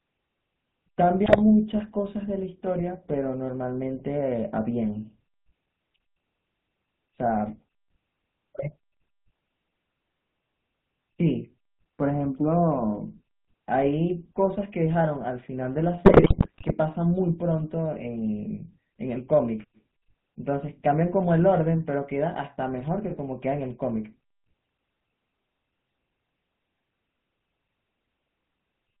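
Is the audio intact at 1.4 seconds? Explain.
No. From 1.26 to 1.41 s the sound breaks into squawks, pops and a gargling roughness, so at 1.4 s it is still inside a burst of GSM bit errors. Corrupted bits reached the decoder, scrambling the filter, pitch and gain values it rebuilds each frame from, so the spectrum bends and the level jumps. The span fits about seven 20 ms frames, and the density of damage points to a bit error rate near 3%.

Under that, and throughout the clip, is the plainly audible GSM full-rate codec: a buzzy, gravelly texture with nothing above 4 kHz. The codec models the vocal tract and drives it with a coarse pulse excitation that keeps only every third sample, which roughens the tone and removes the upper band. This fits the 13 kbps full-rate coder.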